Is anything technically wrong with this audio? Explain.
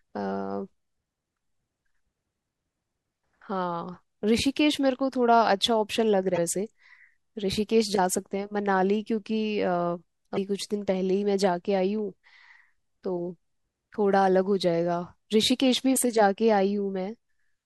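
Yes. Damaged data in the compressed stream makes the decoder misread frames and lose sync at 6.34, 10.33 and 15.92 s. Each time it hunts for the next valid frame header, producing a brief chirp, squawk, click or short hole about 40 ms long in the speech.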